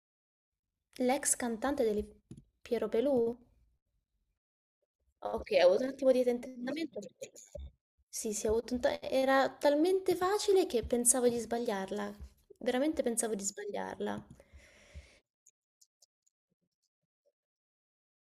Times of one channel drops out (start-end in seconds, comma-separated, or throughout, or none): 3.33-3.42